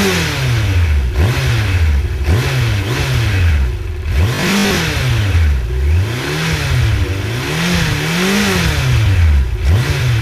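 Robotic sound from repeated short buffers runs from 4.35 to 4.77 s: a rigid, metallic buzz at 50 Hz that follows the original only roughly. It is likely caused by audio arriving too slowly, with about half the time filled by repeating 20 ms chunks while real audio is skipped.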